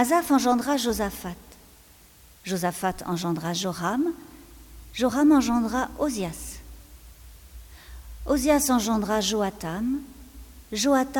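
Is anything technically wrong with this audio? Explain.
Yes. Throughout the clip, low bit depth with dither, consistent with 8-bit audio: dither randomises the rounding error into steady white noise, heard as an even hiss about 30 dB below the signal.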